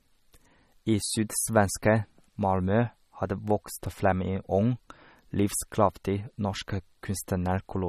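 From start to finish the speech carries plainly audible coding damage, most likely from MP3 compression at a low bitrate, which fits roughly 32 kbps. Nothing is present above 13.8 kHz, where the encoder has cut the treble to save bits. Weak frequency components drop in and out between frames, giving the speech a watery, swirling texture, with metallic chirps on sibilants and smeared, softened attacks.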